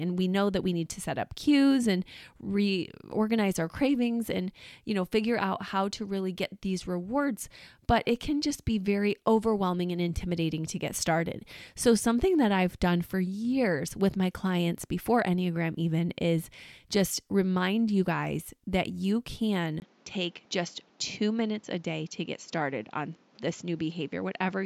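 Input switched to a poorer device at 19.8 s in this speech recording, right after "you guys that you". A 20 ms gap precedes duller audio with nothing above 7.6 kHz, a few dB quieter, over a faint new noise floor, likely from a change of microphone.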